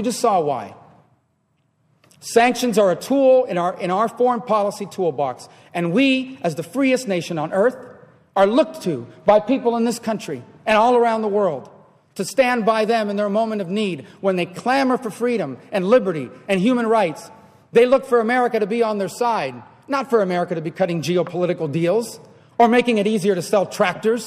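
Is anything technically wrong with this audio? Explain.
No, nothing is technically wrong.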